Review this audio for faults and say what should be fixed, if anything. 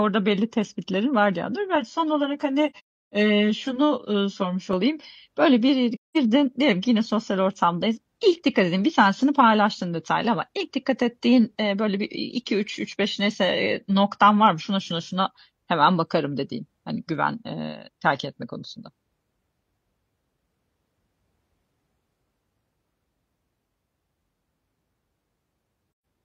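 One channel ran about 10 ms late and was summed to mono from 1.76 to 4.73 s, just after "tespitlerin var bir yandan". This channel delay (comb filtering) cuts notches near 50 Hz and every 100 Hz above, so the speech sounds hollow and phasey. Align both channels before any mono fold-down.

The decoder muted lost AAC frames at 2.70 to 3.14 s (about 384 ms lost, longest gap roughly 300 ms) and at 25.88 to 26.05 s (128 ms). It did the same at 5.95 to 6.17 s, between "böyle bir" and "diyelim ki yine sosyal". This AAC frame loss with muting leaves soft-edged silent holes. Protect the stream against frame loss and conceal gaps instead of muting them.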